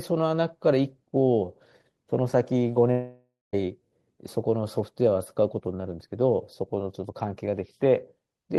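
At 2.91 s the speech hits a long network dropout, likely a run of packets that never reached the receiver. With nothing new to play, the receiver stretches the last sound into a buzzy tail that fades away and leaves about 210 ms of silence before the speech returns at 3.55 s. About 620 ms of the original audio is lost outright, so the speech resumes beyond the missing part rather than where it broke off.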